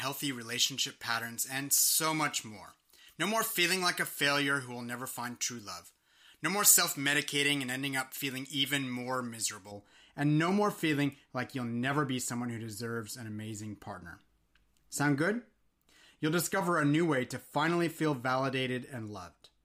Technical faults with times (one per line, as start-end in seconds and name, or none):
0.00-9.71 pre-emphasis left on